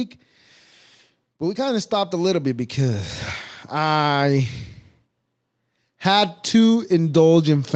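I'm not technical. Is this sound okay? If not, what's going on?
No. From 1.38 to 3.11 s the voice and the background noise swell louder together. That's automatic gain rising: the call software judged the input too quiet and gradually turned it up.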